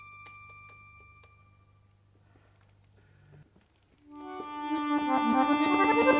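No technical faults can be heard anywhere in this clip. There is nothing in the audio that calls for a timestamp or an explanation.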